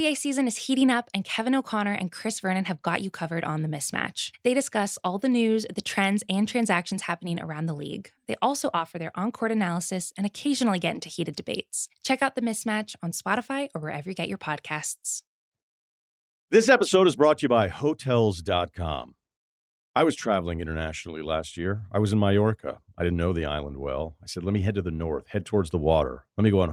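Nothing in this recording gives a listener anything to flag, since no dropouts, clicks, glitches or other technical faults turn up anywhere along the way.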